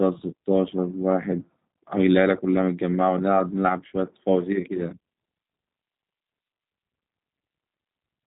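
The speech went through a G.729 codec for its whole length, modelled as a filter-and-pitch approximation with sparse excitation pulses at a rate that fits 8 kbit/s. Nothing above 3.8 kHz survives, so it sounds narrow and muffled, with a plainly audible rough, synthetic grain.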